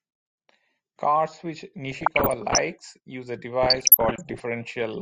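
Speech, with two bursts of DAB burbling, from 1.91 to 2.58 s and again from 3.63 to 4.40 s. The sound burbles as bit errors of around 0.7% and 1% slip past error correction, putting short blips of noise into individual sub-bands.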